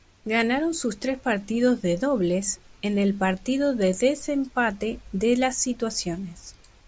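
On listening, nothing in the speech stood out as a technical problem.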